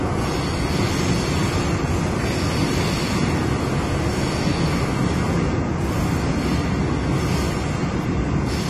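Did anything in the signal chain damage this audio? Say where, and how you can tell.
Yes, at the codec stage, and the damage runs through the whole clip. The sound is dull and smeared, with a fizzy, warbling texture on sustained and noisy parts. This is plainly audible AAC compression, likely AAC-LC at a low bitrate, which fits roughly 32 kbps. On a spectrogram, energy stops at a hard ceiling near 13.1 kHz, with patchy holes and blocky gaps below it. That pattern comes from the coarse quantisation and a lowered cut-off.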